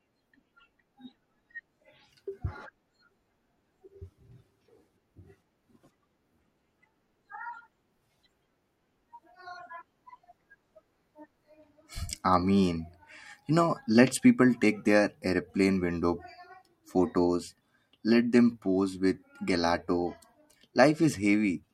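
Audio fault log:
Nothing wrong turned up here, just the speech running along with no faults to log.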